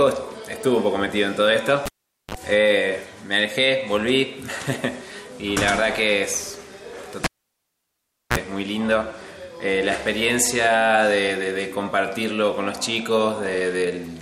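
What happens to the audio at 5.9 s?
Nothing goes wrong at 5.9 s; the audio plays through that moment intact, with no dropout, click or other fault.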